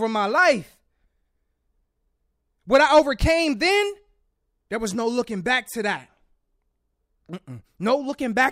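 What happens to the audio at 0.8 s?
A drift correction step runs from 0.38 to 1.02 s: the speech plays about 6.2% fast, raising pitch by about 104 cents, roughly a semitone, before snapping back. Clock-matching software likely jumped the playback rate in one step to rebalance its buffer.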